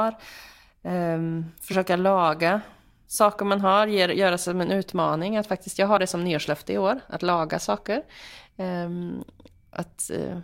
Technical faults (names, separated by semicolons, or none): compressed frames skipped